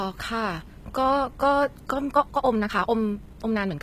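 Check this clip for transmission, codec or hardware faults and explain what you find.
Two faults are audible. One runs through the whole recording and one affects its final stretch.

HE-AAC compression damage is present throughout, and it is plainly audible. The treble sounds gritty and metallic, and sibilants come across lispy. The likely cause is HE-AAC coding at a low bitrate, which fits something around 20 kbps. That codec keeps only the lower band. It fakes the upper band by copying lower content upward under a rough envelope. The rebuilt harmonics don't align with the real ones.

A time-stretched section runs from 2.07 s to the end at 3.82 s. Here the speech suddenly runs about 1.69 times faster, while its pitch stays unchanged. It sounds rushed. The likely cause is software squeezing the audio to fit a shorter length. To keep the pitch, it drops short slices of the signal. That leaves a hurried rhythm.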